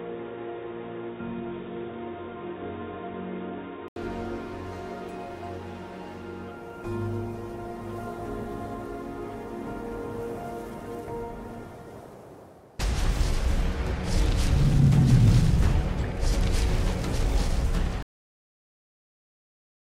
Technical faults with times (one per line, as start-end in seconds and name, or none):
0.00-3.96 input switched to a poorer device
18.02-19.80 cut-off end